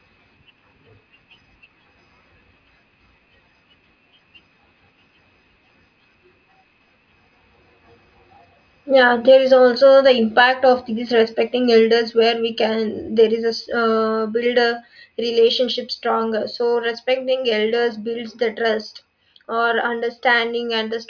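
No technical faults are audible anywhere in this recording.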